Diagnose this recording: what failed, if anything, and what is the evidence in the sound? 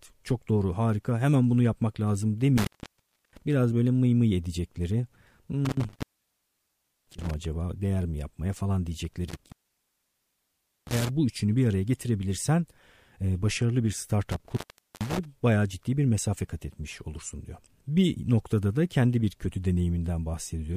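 Intermittent contact in the analogue wiring: the speech cuts out four times, at 2.58–3.42, 5.65–7.45, 9.29–11.09 and 14.31–15.25 s, open for 0.66, 1.05, 1.34 and 0.44 s. A loose cable or plug is breaking the circuit. Crackle at each edge and faint hiss during the gaps, rather than clean digital silence, rule out network packet loss.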